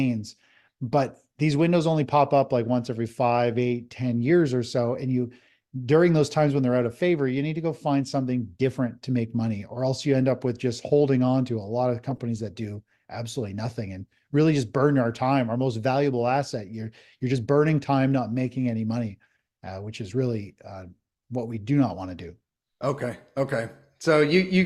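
A short burst of chirpy, squeaky noise cuts across the audio from about 12.09 to 12.20 s, a blip roughly a tenth of a second long peaking around -20 dBFS. It is a corrupt frame decoded: bit errors damaged a run of roughly seven compressed frames, and the decoder played them anyway, so misread gains and codes put energy at the wrong frequencies for the length of the damaged stretch.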